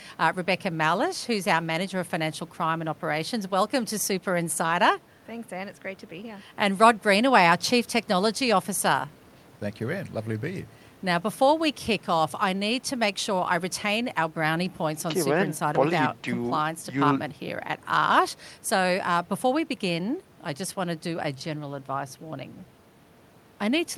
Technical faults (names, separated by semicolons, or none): none